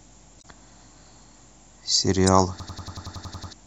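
At 0.38 to 0.45 s and at 2.27 s, damaged data in the compressed stream breaks decoder sync, giving short glitches rather than repeats. From 2.60 to 3.53 s, a system hang loop replays one 93 ms slice ten times at 10.8 Hz. The exact repetition sounds like a machine-gun stutter, fits a 4096-sample buffer, and costs about a second of speech.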